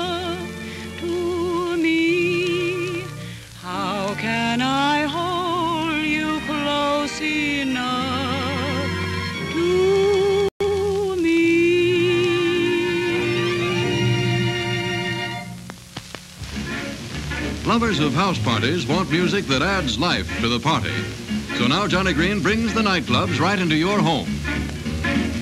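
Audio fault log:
10.49 to 10.61 s, playback stall: The sound stops dead in mid-flow. Silence holds for 120 ms. Nothing fades out first; the output simply goes empty. The cause is likely the player running short of data or its thread being blocked. No new audio reaches the output during the gap. When output returns, the sound picks up from the point where it stopped.
10.61 to 10.73 s, time-compressed catch-up: Right after the gap, the audio rushes. It plays at about twice its normal rate for 120 ms. Pitch stays where it was. The player is clearing its backlog by removing short pieces and cross-fading the joins. The hurry lasts only long enough to absorb the delay from the stall.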